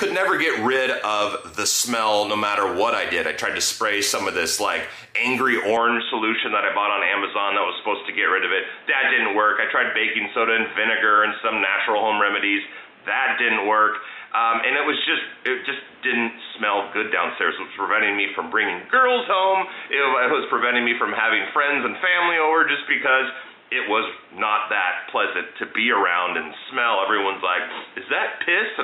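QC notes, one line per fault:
5.77 s to end, input switched to a poorer device: At 5.77 s the sound turns dull and boxy with no gap at the change. From there to the end nothing is heard above 3.8 kHz, so the top band is cut away. A faint new background noise sits well below the signal. The level stays roughly the same. The sudden narrowing, the new tone and the fresh noise floor point to a likely switch to a lesser microphone or a headset call profile.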